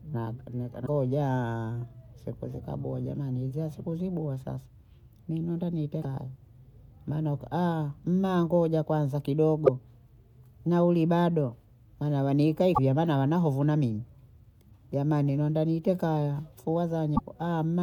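Five short bursts of damaged data in a compressed stream break up the speech. They fall at 0.83 to 0.89 s, 5.99 to 6.05 s, 9.66 to 9.69 s, 12.71 to 12.79 s and 17.13 to 17.20 s. Each lasts a few tens of milliseconds. Corrupted bytes in the coded stream make the decoder misread those frames and lose sync. It then hunts for the next valid frame header. Each event is heard as a brief chirp, squawk, click or short hole.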